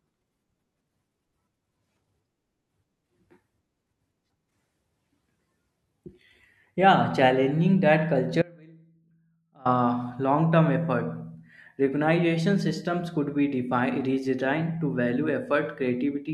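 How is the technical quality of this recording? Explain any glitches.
There is one glitch: an audio dropout to a faint residue. From 8.42 to 9.65 s, right after "challenging that", the speech abruptly drops to a faint trace about 25 dB below normal for 1.23 s, then snaps back. The likely cause is a brief loss of the wanted signal while the downstream path stayed live.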